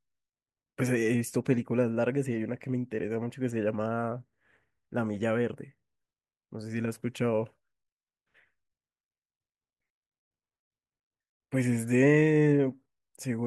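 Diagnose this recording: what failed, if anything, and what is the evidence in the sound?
Nothing failed; no fault is audible in this speech.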